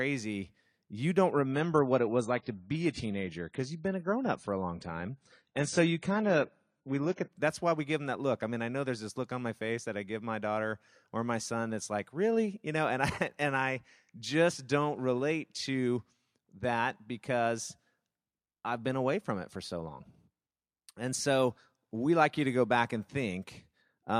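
Speech here, and from 1.32 to 7.32 s the adaptive stream drops to a lower bitrate: the top end suddenly stops at 10 kHz and codec smearing comes in, with no gap, which sounds like AAC falling from around 96 to 24 kbit/s while the connection sagged.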